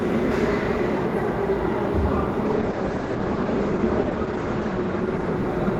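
At 2.47 s a call bitrate drop sets in and lasts to the end at 5.79 s. The sound turns coarse and muffled, which fits the encoder falling from about 48 to 11 kbps. On a spectrogram, content above 8 kHz abruptly disappears, leaving a flat ceiling.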